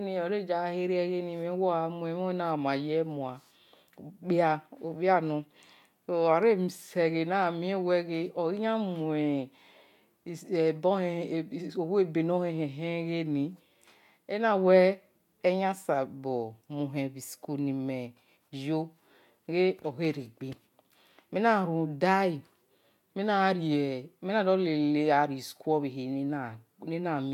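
No technical faults can be heard anywhere in the recording; the signal stays steady and intact throughout.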